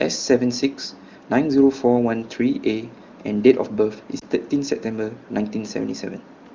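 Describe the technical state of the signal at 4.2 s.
A single AMR speech frame was lost between 4.19 and 4.23 s. Radio errors made it fail its checksum, so the AMR-WB decoder filled the 20 ms gap by repeating the previous frame's pitch and vocal tract settings at reduced gain, heard as a brief dip or warble in the speech.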